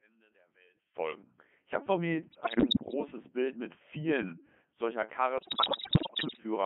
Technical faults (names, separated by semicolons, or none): Codec 2 vocoder; bit errors on digital voice radio